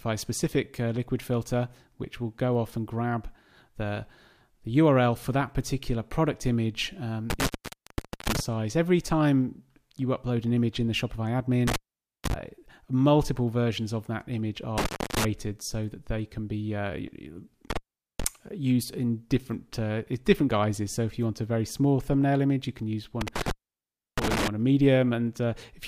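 Intermittent contact breaks the signal at 7.30–8.40, 11.68–12.34, 14.78–15.25, 17.70–18.24 and 23.21–24.48 s. A loose connection opens for roughly 0.3 to 0.8 s each time, so the sound drops to faint hiss, with crackle as contact breaks and returns.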